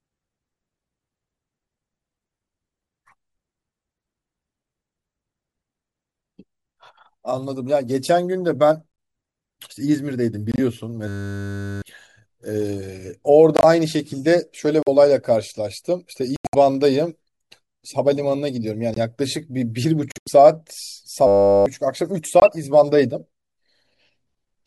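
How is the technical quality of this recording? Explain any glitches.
The recording is marred by two kinds of fault: repeated dropouts and two buzzing freezes.

Corrupt frame muted, at 8.92–8.98, 10.52–10.59, 13.57–13.65, 14.83–14.88, 16.36–16.55, 18.94–18.98, 20.12–20.28 and 22.40–22.47 s: damaged compressed frames were rejected by the decoder and replaced with silence. The speech cuts abruptly to holes of about 40 to 180 ms, with timing preserved.

System hang loop, at 11.08–11.82 s and 21.27–21.66 s: the system stalled while the audio hardware kept replaying a single 10 ms buffer. That exact repetition produces a steady 100 Hz buzz, and roughly 0.7 s and 0.4 s of speech are lost.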